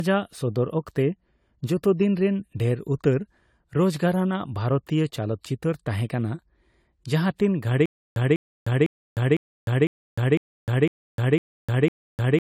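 The whole clip has that swirly, hollow, smeared character of generation loss, with consonant attacks blurred. It's likely been through AAC-style encoding a few times over, which fits something around 64 kbit/s, each pass re-quantising on a shifted frame grid so the damage stacks.

From 7.86 s to the end there's a stutter with silent gaps. A roughly 0.2 s fragment repeats nine times, every 0.5 s, with about 0.31 s of dead digital silence between. That's the likely signature of a stalling stream replaying its last chunk, so the speech that should fill that stretch is gone.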